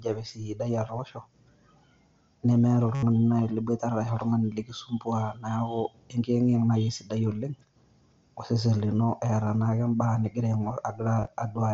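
At 2.94 to 3.03 s, concealed Bluetooth headset packet loss replaces about 83 ms of speech with a looped copy of the preceding waveform, giving a buzzy held tone and a slight warble on recovery. At 11.20 to 11.28 s, shorter scattered gaps, none longer than 15 ms, drop about 45 ms in total.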